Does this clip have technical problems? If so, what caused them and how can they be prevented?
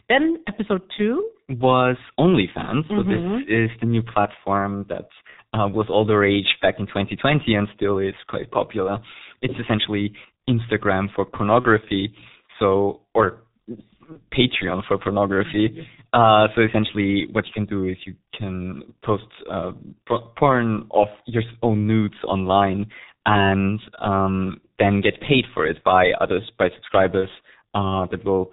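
Yes. Throughout, the speech sounds muffled and hoarse, with smeared consonants and nothing above 4 kHz. This is heavy G.723.1 codec damage, which fits its low 6.3 kbit/s mode with 30 ms frames. Prevent it by negotiating a wideband codec such as Opus at a higher bitrate.

Brief fading smears occur at 5.30 s (after "the new platform that", before "uh was all the"), 11.60 s, 14.12 s and 27.20 s (after "it by others by"), each lasting about 50 to 75 ms. This is VoIP packet loss concealed by the speech codec: each gap fits a single lost 30 ms frame that the decoder filled by extrapolating, with the distortion lingering briefly afterwards. Prevent it by improving network reliability, using a properly sized jitter buffer, or adding forward error correction.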